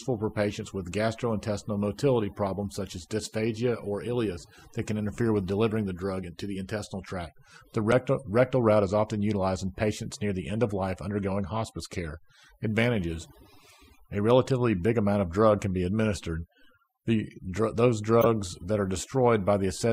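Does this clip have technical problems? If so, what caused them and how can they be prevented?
Yes. Overdone noise removal runs throughout, with aggressive band-gating leaving a near-silent, twinkly background. Ease off the reduction strength next time.

Corrupt frames decoded produce short glitches at 7.91 s, just before "rectal route is often"; at 10.68–10.72 s, after "patients near the end"; and at 18.21–18.26 s, before "that are". Damaged bits misplace energy for two or three frames. The last one is loud, while the middle one is faint. Add error checking so bad frames get concealed, not played.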